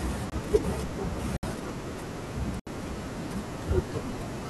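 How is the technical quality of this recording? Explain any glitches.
The recording has three dropouts. Blocks of digital silence occur at 0.30 to 0.32 s (21 ms, which fits a 1024-sample buffer), 1.37 to 1.43 s (64 ms) and 2.60 to 2.67 s (72 ms). In each, the speech was replaced by zeros, probably because the output buffer went unfilled in time. The sound drops out and returns with no fade, so each gap is heard as a short hole, the first almost a tick.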